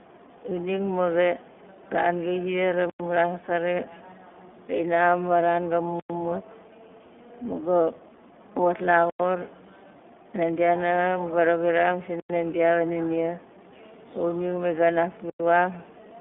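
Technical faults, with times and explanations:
Throughout, iLBC codec: the speech went through a 15.2 kbps narrowband codec that codes each 20 ms frame on its own, so nothing above about 3.7 kHz survives. The result is muffled, telephone-like and plainly rough and synthetic in texture.
2.90 to 15.30 s, gap between chunks: the audio arrived in 3-second chunks with 100 ms of silence inserted at each join, at 2.90, 6.00, 9.10, 12.20 and 15.30 s. Nothing is lost, but short holes break the speech, the first between "ran gai ziar la" and "ran akari".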